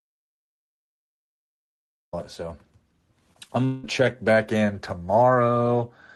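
The clip opens in an audio dropout to silence that is already under way and lasts until 2.13 s: silence with no room tone, likely a lost input while the recorder kept writing. The speech then enters abruptly mid-flow.

From 3.33 to 3.85 s, just before "check back in", repeated packet loss gives a choppy, robotic sound. Four gaps are patched by stretching the preceding sound, about 42% of the span, the longest near 0.18 s. The call-codec path's top end stops around 12 kHz.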